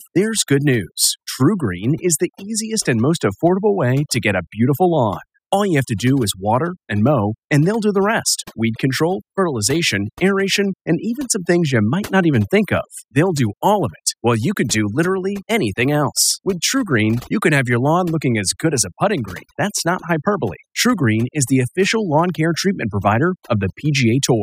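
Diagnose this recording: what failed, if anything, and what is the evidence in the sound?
Overdone noise removal at the call-processing stage, across the whole speech clip. Between phrases the background falls to near silence scattered with twinkling specks. A suppressor set too aggressively is pulling individual frequency bands far down or out whenever they sit near its noise estimate, taking quiet voice components with them. What separates this from codec coding damage is that the effect follows signal level rather than bitrate.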